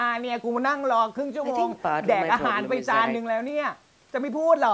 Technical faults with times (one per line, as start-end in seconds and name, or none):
none